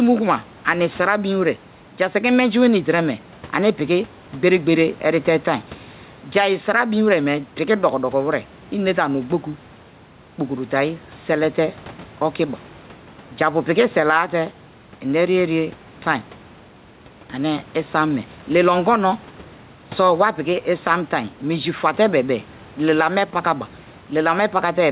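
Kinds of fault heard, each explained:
Gain pumping: Throughout the speech, the room noise sits about 29 dB below the talker. The level swings by around 5 dB, so quiet and loud passages sound squashed together. This is likely an input gain set too high for the microphone, with a fast limiter or compressor clamping down on every loud syllable through the narrowband call path.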